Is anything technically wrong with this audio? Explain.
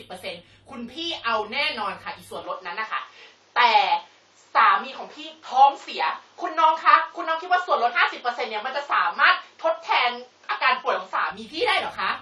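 Yes. Throughout the speech there is plainly audible codec damage with nothing above 15.4 kHz, likely AAC compression at a low bitrate, which fits around 32 kbps. Quantising frequency lines against a hearing model lowers the cut-off and smears detail, leaving the speech dull with a warbling, fizzy texture.

From 2.44 s to 11.31 s the band narrows to nothing above 7.6 kHz, with a level shift of roughly 5 dB and a new noise floor about 40 dB under the signal, likely an input switched to a poorer device. There is no gap at the switch. Full bandwidth returns at 11.31 s.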